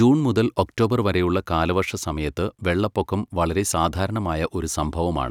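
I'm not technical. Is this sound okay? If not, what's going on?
Yes, this one's fine: nothing here sounds broken or glitchy, so you can relax about it.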